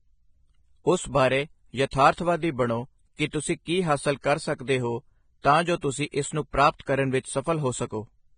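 Throughout the speech there is heavy codec damage, likely Vorbis compression at a low setting that fits a bitrate near 20 kbps. Nothing remains above 9.7 kHz, and the surviving treble is quantised into grainy hiss, roughening vowels and blurring consonant onsets.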